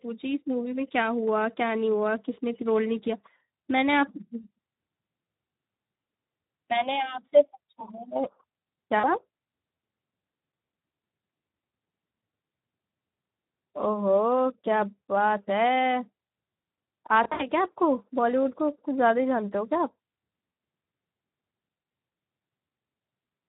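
The Speex codec runs throughout at a low setting, with a hoarse, noisy quality that fits roughly 11 kbps. With too few bits for the excitation, the speech carries plainly audible coding damage and sounds grainy.

VoIP packet loss concealed by the speech codec occurs at 4.41 to 4.44 s, 8.99 to 9.09 s, 17.23 to 17.49 s, and 20.51 to 20.57 s. At each gap the decoder extends its last pitch and filter, so the sound smears into a fading buzzy tone or coloured noise. The 17.23 s stretch has scattered gaps totalling 120 ms.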